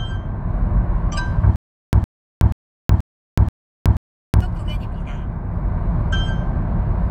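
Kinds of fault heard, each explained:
Stutter with silent gaps: from 1.56 to 4.41 s, a 111 ms fragment repeats six times between 371 ms silences, likely a stalled stream replaying its last chunk.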